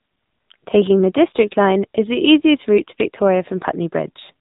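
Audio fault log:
Throughout: AMR narrowband mobile codec. Nothing above 4 kHz reaches the output, so the speech sounds boxed into a telephone band and lacks crisp sibilants. The plainly audible damage comes from the vocal-tract model being driven by only a few pulses per 5 ms subframe. That sparse excitation leaves a buzzy, synthetic edge on the voice, which fits one of the lower AMR-NB modes, around 7.4 kbps.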